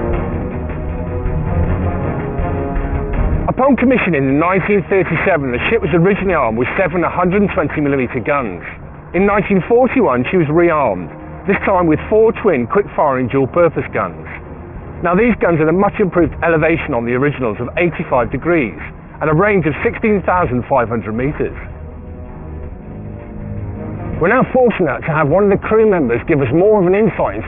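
Aliasing runs throughout: resampling to about 6 kHz without a proper low-pass folds content above 3 kHz back down, leaving a gritty, metallic haze roughly 15 dB under the signal.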